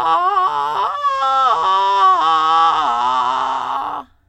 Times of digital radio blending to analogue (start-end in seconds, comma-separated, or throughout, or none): 0.85-3.81